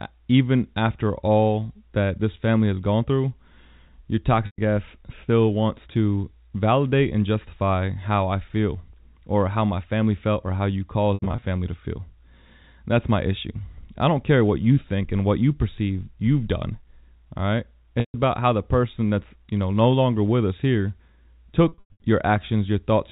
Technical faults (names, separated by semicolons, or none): packet loss with pitch repetition